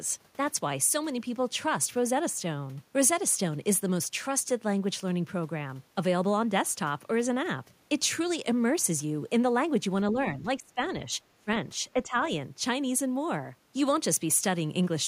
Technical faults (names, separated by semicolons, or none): speech suppressed in double talk